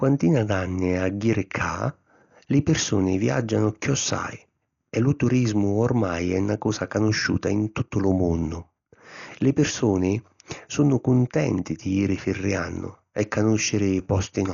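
Likely Dolby Digital compression, heavily starved in a way that fits about 48 kbps, removes everything above 7 kHz and fills gaps with noise, leaving speech dull, rough and fluttering.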